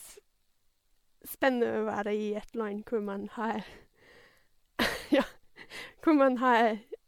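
Speech throughout with generation loss: swirly, hollow and smeared, with blurred attacks, likely from about seven MP3 passes at around 96 kbit/s, nothing above 19.9 kHz.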